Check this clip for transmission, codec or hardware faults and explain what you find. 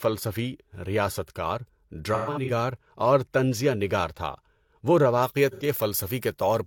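Two kinds of fault are audible: AAC frame loss with concealment at two points, and pre-emphasis left on near the end.

From 2.14 to 2.51 s, AAC frame loss with concealment replaces about 213 ms of speech, scattered across roughly 340 ms, with the longest stretch around 150 ms. That fits about five lost frames. The decoder rebuilt each gap from the last good spectrum, so the speech turns smeared, noisy and phasey rather than dropping to a clean gap. A second loss from 5.51 to 5.63 s covers 85 ms, consistent with two frames. Plain dropouts would sound like silence. These patches keep a blurred echo of the preceding sound.

From 5.23 s to the end, pre-emphasis is left on. A 50 µs FM-style treble boost was applied and its matching de-emphasis never followed, leaving 10 kHz about 11 dB hotter than 1 kHz. The speech becomes thin, bright and sibilant. Unlike a random EQ tilt, the lift follows that standard rising curve.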